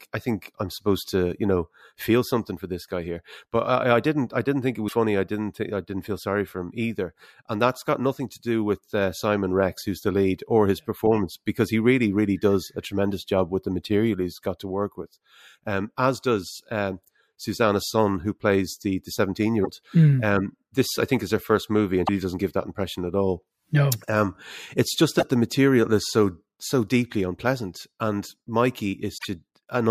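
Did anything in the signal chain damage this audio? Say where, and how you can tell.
Yes. Damaged data in a compressed stream at 4.85–4.93, 19.61–19.66, 22.06–22.09, 25.19–25.23 and 29.14–29.25 s produces short chirps or blips of 26 to 110 ms in the speech. Corrupted coded bytes make the decoder misread frames, lose sync, then resume.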